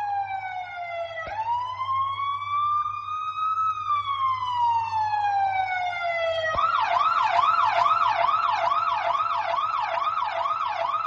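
Nothing stood out as a technical problem on listening to this audio.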